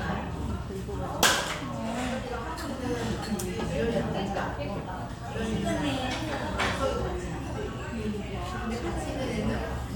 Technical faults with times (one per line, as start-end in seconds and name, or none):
none